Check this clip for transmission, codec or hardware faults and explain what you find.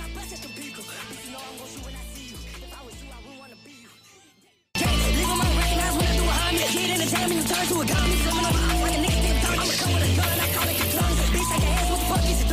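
A train of clicks runs from 6.40 to 8.60 s. Over those two seconds or so, a regular stream of pulses arrives at 13.2 per second, around thirty clicks in all, each much the same shape and standing well above the surrounding sound, roughly 10 dB louder at the peaks. The cause is likely electrical interference from nearby equipment or a faulty connection or power supply. The result is an even, mechanical ticking laid over the audio.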